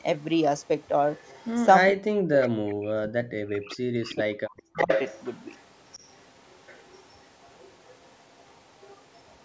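Echo leak, 0.59 to 1.54 s: a faint delayed copy of the speech trails the original by 407 ms, sitting roughly 30 dB below it. The likely cause is a far end playing the call on a loudspeaker, where the echo canceller failed to strip out everything its microphone picked up, so the residue was sent back. It sounds like a distant repeat behind the talker.

Speech suppressed in double talk, 1.92 to 4.9 s: for about three seconds the talker's level falls away, dipping by as much as about 40 dB at its deepest. This is likely the echo canceller facing both sides speaking at once. Unable to tell the local voice from loudspeaker echo, it turned everything down together.

Within that stretch, the echo leak returns in short bursts at the same 407 ms delay. At 2.41 to 2.49 s it is loudest, only about 15 dB down. At 3.53 to 3.73 s and 4.07 to 4.13 s it is about 25 dB down. From 4.58 s to the end it settles into a faint, continuous repeat about 30 dB below the speech.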